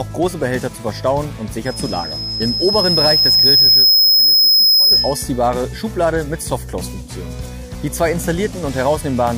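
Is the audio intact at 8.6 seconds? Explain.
Yes, the audio is intact at 8.6 seconds, with no dropout, click, distortion or other fault at that moment.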